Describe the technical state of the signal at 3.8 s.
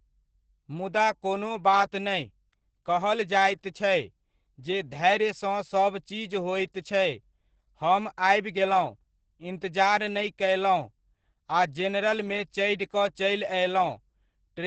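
At 3.8 s the speech carries Opus voice compression, present for the whole clip. The coder is running its SILK linear-prediction mode in wideband, so nothing survives above 8.5 kHz, and the excitation is coded coarsely, which fits a bitrate near 10 kbps. The result is muffled, hoarse and faintly robotic. A plain low-pass filter would only dull the top; here the grainy, buzzy texture inside the remaining band marks codec damage.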